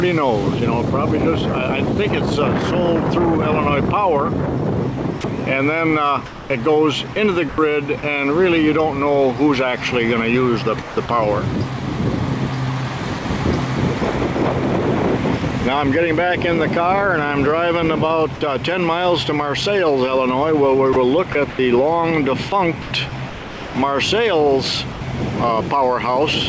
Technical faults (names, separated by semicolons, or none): sound dropped by the voice detector; sound chopped by the voice detector